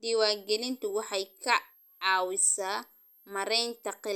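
A thin, high whistle enters at 0.33 s and continues under the speech to the end, its pitch wandering between about 12.3 and 12.9 kHz and sitting roughly 30 dB below the speech. This is switching supply whistle: a switching power supply in the chain is running in an audible burst mode or beating against another supply, so its switching frequency falls into hearing range and shifts as the load on it changes.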